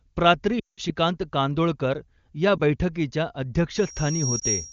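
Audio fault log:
0.59–0.80 s, lost AMR speech frames: radio errors corrupted about 180 ms of frames, so the decoder repeated old parameters with falling gain, and the speech drops to near silence within two frames.
2.58–2.61 s, lost AMR speech frame: a single corrupted frame was concealed from the previous good one, leaving a brief dip or warble in the speech.
3.72–4.73 s, loudspeaker feedback squeal: the microphone picked up its own loudspeaker with loop gain above one at 5.6 kHz, so a single tone swells over roughly 0.7 s to about speech level.
4.39–4.42 s, lost AMR speech frame: another single frame failed and was concealed, causing a short dip under the ongoing squeal.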